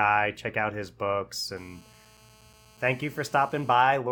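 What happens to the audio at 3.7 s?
A nearby 2G handset on a call is pulsing its transmitter about 217 times a second, and the audio circuitry rectifies those radio bursts. At 3.7 s, this GSM phone buzz is just ending: a steady, raspy 217 Hz drone rich in harmonics, about 31 dB below the speech, running from 1.57 s to 3.75 s.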